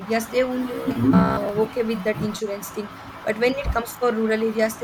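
From 0.74 to 1.49 s the speech turns into a rigid, metallic buzz around 66.8 Hz, robotic sound from repeated short buffers. It's likely a stalled feed replaying a roughly 15 ms chunk, so most of that stretch is repeats rather than new audio.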